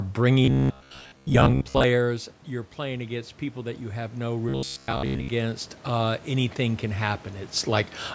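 From 0.45 to 1.84 s, and again from 4.49 to 5.28 s, the speech becomes a rigid metallic buzz at 66.9 Hz. It likely comes from robotic sound from repeated short buffers, with most of the audio replaced by repeats of roughly 15 ms. Unlike a codec warble, the pitch stays fixed.

From 1.97 to 7.97 s, after the talker drops back around 1.5 s, automatic gain rising lifts the level by about 10 dB. Voice and room noise swell together over seconds, which sets it apart from a talker simply moving closer.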